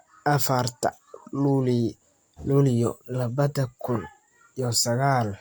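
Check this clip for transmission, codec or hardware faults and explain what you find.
Nothing in the recording stood out as a fault on listening.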